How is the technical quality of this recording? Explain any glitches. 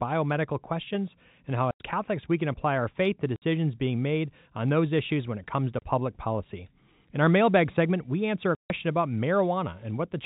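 The speech is broken by four short holes of packet loss filled with silence. The first falls at 1.71 s, after "questions and how", and lasts 90 ms. The second, at 3.36 s, sits between "apply our faith to" and "being made on those" and runs 60 ms. The third, at 5.79 s, falls between "when it comes to" and "public policy" and lasts 30 ms. The last, at 8.55 s, is the longest at 150 ms. The receiver had nothing to play for the missing packets and put in digital silence. Each gap starts and stops abruptly. What sets this apart from a concealed dropout is that no smeared or repeated sound fills the hole. Every length is a multiple of 30 ms, which fits a 30 ms packet interval. The telephone-band G.711 coding is audible as the cut-off at 4 kHz, with a faint quantisation noise about 38 dB under the signal.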